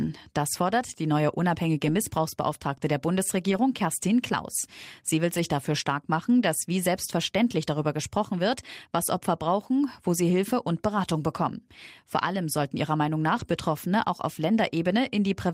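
Speech, with six spots where lost packets were rebuilt from error correction: 1.83 to 1.93 s right after "fordert die neue", 3.47 to 3.57 s, 5.33 to 5.39 s just before "dafür stark machen dass", 7.81 s between "machen dass wie selbstverständlich" and "gesprochen wird was", 13.35 to 13.41 s, and 14.53 s. There are no gaps, but each patch sounds rougher and noisier because the decoder played the low-bitrate backup copy carried in the next packet. The stretches run 20 to 60 ms, which fits one to three missing 20 ms frames.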